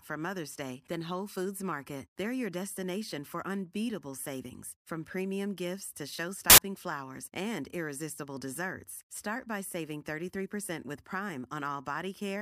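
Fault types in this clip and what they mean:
Samples built from the wrong bytes: at 6.50 to 6.58 s, between "from premium gifts to" and "flowers and irresistible desserts", the bytes of each sample are assembled out of order, so the rapidly changing low bits dominate and the speech becomes a loud 80 ms burst of harsh broadband noise.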